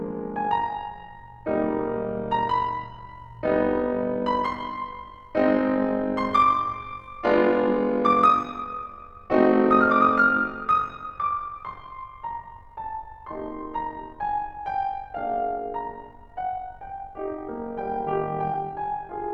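A rough, buzzy flutter rides on the music from start to finish, the level pumping up and down around 50 times a second by about 6 dB, so sustained tones take on a grainy, robotic tremolo. This is overlap-add ripple: the audio was split into windowed frames and reassembled with an overlap whose windows don't sum to a constant gain, leaving a level dip and peak once per frame.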